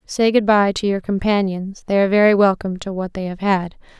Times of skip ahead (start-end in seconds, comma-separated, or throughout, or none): none